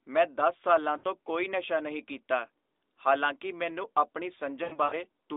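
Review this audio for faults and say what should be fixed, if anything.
Lost AMR speech frames occur at 0.98–1.06 s, after "ਮੈਂ ਦਸ ਸਾਲਾਂ", and at 4.64–4.98 s, after "ਕੀਤਾ ਹਾਲਾਂਕਿ ਮੈਨੂੰ ਆਪਣੀ". The decoder stretches the last good frame with falling gain, so the sound warbles and fades rather than cutting abruptly to silence. Better radio error protection would prevent it.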